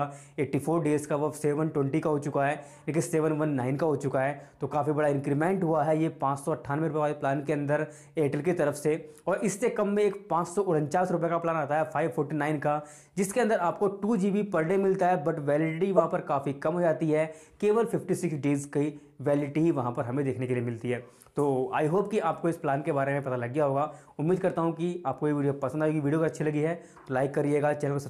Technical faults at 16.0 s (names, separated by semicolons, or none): corrupt frame decoded